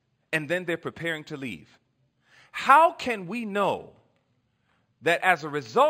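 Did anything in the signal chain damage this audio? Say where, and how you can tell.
Yes: imaging from linear upsampling throughout, at the sample-rate conversion stage. Raising 11 kHz to 48 kHz by straight-line interpolation leaves mirrored spectrum from 5.5 kHz to 11 kHz, around 30 dB down.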